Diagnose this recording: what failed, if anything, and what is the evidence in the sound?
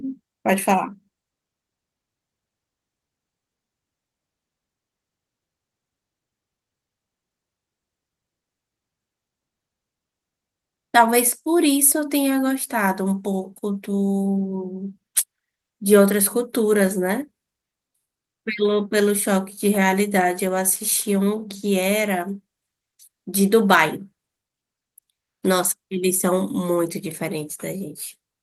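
Nothing failed in this recording, and nothing in the sound points to a fault at any stage.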